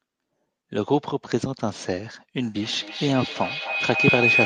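Speech recorded over a call path. A feedback howl starts at 2.42 s and runs to the end: a loop between two nearby devices builds a tone around 3 kHz, pulsing roughly every third of a second, and peaks about 1 dB above the speech.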